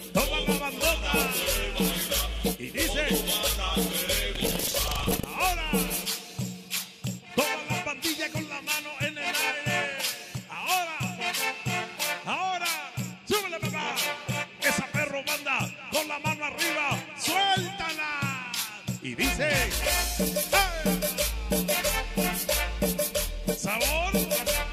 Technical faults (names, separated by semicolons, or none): buffer tearing